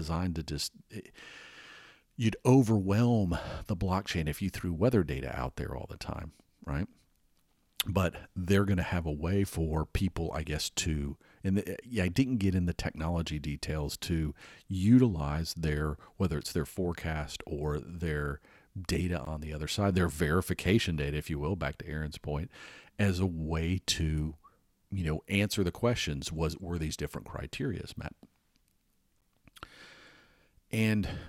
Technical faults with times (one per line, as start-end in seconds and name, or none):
19.25 gap at a join of encoded pieces
29.21 gap at a join of encoded pieces